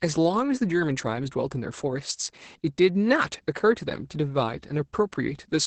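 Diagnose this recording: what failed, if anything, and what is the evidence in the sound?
Codec stage: Opus voice compression throughout, with the speech band-limited near 8 kHz and sounding hoarse and slightly robotic, which fits SILK coding at roughly 10 kbps.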